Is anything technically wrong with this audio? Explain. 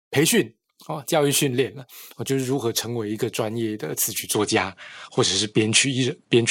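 Yes. From 4.34 s to the end, the sound changes character abruptly with no gap at the transition: nothing remains above 10.5 kHz, the level shifts by about 5 dB, and a new background noise appears about 45 dB below the signal. This is likely an input switched to a poorer device, with the system changing microphones mid-recording. The narrower bandwidth and different noise floor of the new device make the speech sound duller and less airy.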